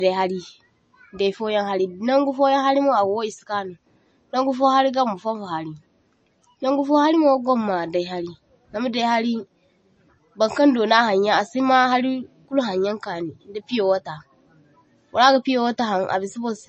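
Throughout the speech, sibilants turn watery and swirly, and nothing sounds above about 8.3 kHz, leaving it dull. This is likely MP3 compression at a starved bitrate, near 32 kbps, cutting the treble and dropping weak frequency lines frame by frame.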